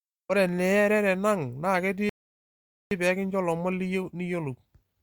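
At 2.09 s the speech halts and the audio falls to silence until 2.91 s, a rebuffering stall: playback outran the downloaded data and waited for more to arrive. When the sound returns with "peeekincho lomon", it picks up exactly where it broke off, so about 0.82 s is added rather than removed. That distinguishes it from a dropout or lost packet, where the gap replaces audio and the speech jumps ahead.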